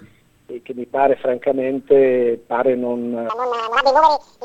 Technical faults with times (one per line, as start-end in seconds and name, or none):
3.29-4.44 section at the wrong speed